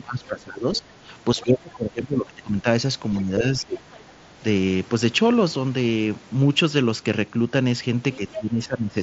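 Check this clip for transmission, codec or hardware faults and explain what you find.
Two echo-cancellation faults recur, heard through a Bluetooth mSBC headset link whose wideband sound and light graininess are what that codec gives.

Speech suppressed in double talk, from 0.0 to 1.09 s, 1.35 to 2.66 s, 3.23 to 4.42 s and 8.17 s to the end: the echo canceller, likely confused by both sides talking at once, turned down the near talker with the echo. The speech sinks by roughly 20 dB, about 10 dB in the last stretch.

The other side's voice leaking through, at 0.75 to 0.8 s and 8.13 to 8.34 s: loudspeaker pickup the canceller likely failed to fully subtract. Brief scraps of a second voice sit about 20 to 25 dB under the speech.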